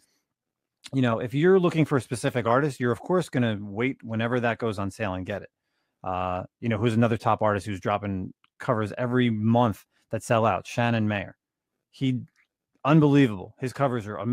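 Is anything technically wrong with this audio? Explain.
No, nothing technically wrong stood out on listening to this speech recording.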